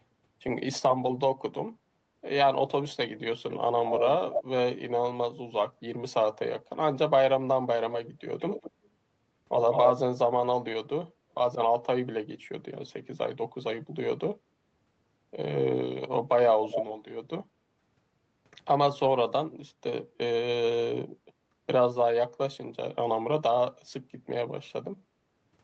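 Echo leak at 4.32–4.44 s and 9.71–9.93 s: a delayed copy of the speech returns about 0.23 s later, at roughly −5 dB, then about 0.19 s later at nearly full level. This is likely a far-end loudspeaker whose echo canceller let part of the pickup through.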